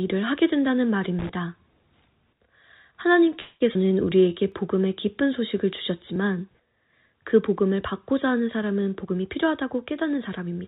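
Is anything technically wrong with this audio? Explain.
Yes, the speech has several faults, heard through a narrowband call path with G.711 A-law coding, so nothing reaches above 4 kHz.

From 1.19 to 1.29 s there is an irregular scratchy burst, a loose connector crackle. A worn contact breaking and remaking the circuit chops the signal and adds pops.

At 3.40 s the sound freezes into a fading buzz for 202 ms until 3.62 s, then resumes with nothing lost. This call audio freeze was likely caused by delayed packets emptying the jitter buffer.

At 3.74 to 3.77 s the speech jumps forward with almost no gap, a skip ahead. Roughly 70 ms of audio was dropped, so the two sides are joined almost directly.

From 3.81 to 4.35 s the speech drags at 88% speed with unchanged pitch. This is a jitter buffer slow-down: repeated pitch periods added 72 ms to rebuild the buffer's reserve.

At 4.52 s and 6.16 s there is a brief click. 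Each is a repeated buffer, where a 10 ms chunk played one extra time because new audio arrived late.

From 9.04 to 10.62 s the speech sounds hurried at 111% speed with the same pitch. This is a jitter buffer speed-up, where about a fifth of a second was trimmed to cut an excess delay.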